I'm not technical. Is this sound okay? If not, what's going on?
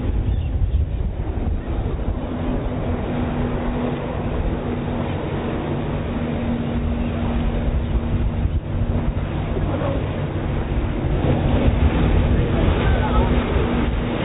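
Yes, this sound is okay, and there's nothing going on with it that needs fixing.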